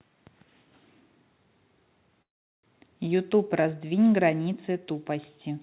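At 2.22 s the speech halts for about 0.43 s in a call audio freeze, likely from delayed packets draining the jitter buffer. It is near-silent until 2.65 s, then resumes intact but later, with the 4 kHz telephone-band limit audible throughout.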